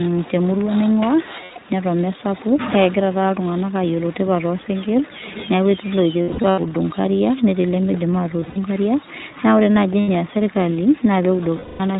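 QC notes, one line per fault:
Throughout: iLBC codec, plainly audible damage. The band stops at 4 kHz, so sibilants and breath lose their top and the speech sounds boxed-in and slightly rough and synthetic. At 15.2 kbps each 20 ms frame's excitation is coded on its own, which gives a rough, synthetic texture to voiced sounds. On a spectrogram there is a hard ceiling with no energy above 4 kHz.
1.44–1.58 s: lost iLBC frames, 120 ms missing. The decoder fills the gap by repeating the last pitch cycle with noise mixed in, so the sound becomes a short held, buzzy vowel. Because iLBC frames are coded independently, clean speech resumes almost at once when packets arrive again. On a spectrogram the harmonics run flat and unchanging, and the waveform shows a repeating periodic cycle.
6.22–6.60 s: lost iLBC frames, just after "neeku etii", 240 ms lost, scattered over 360 ms, with the longest run about 70 ms. 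Short held-vowel stretches alternate with real speech, which gives a stuttery, buzzy patch. The spectrogram shows several brief flat-harmonic blocks interrupting normal formant movement.
8.41–8.57 s: lost iLBC frames, 120 ms lost within 160 ms, with runs up to about 70 ms, just before "inkariak naa ore". There are brief buzzy sustains, and the speech recovers quickly. These show as short frozen-harmonic bands with repeated cycles in the waveform.
10.00–10.10 s: lost iLBC frames, 80 ms. A short buzzy hold with a quick recovery. It shows as a narrow flat-harmonic strip.
11.56–11.81 s: lost iLBC frames, 240 ms in one gap. The repeated pitch cycle and noise fade over the long loss, so a breathy, dwindling vowel is heard. On a spectrogram the frozen harmonics dim toward the end, and the waveform envelope tapers before speech returns.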